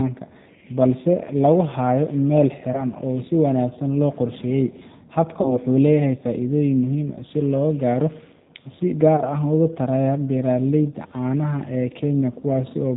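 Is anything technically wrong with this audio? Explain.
Yes. Throughout, the G.729 codec is plainly audible: the speech is limited below 4 kHz and sounds rough and synthetic, fitting an 8 kbit/s G.729A stream that rebuilds speech from a filter and sparse pulses.

VoIP packet loss concealed by the speech codec occurs at 2.72–2.85 s, 5.41–5.59 s and 9.16–9.22 s. The decoder extrapolates its last frame into a fading buzzy tone or coloured noise, which recovers slowly afterward. The gaps fit one, two and one lost 20 ms packets.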